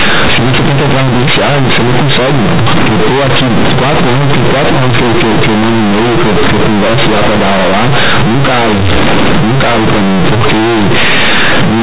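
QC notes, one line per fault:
Throughout: companded audio read as linear. Mu-law telephone bytes are played as plain 8-bit samples with no expansion, so each sign change jumps about half the output range and quiet parts match loud ones; the speech becomes loud, buzzy distortion with heavy noise in pauses.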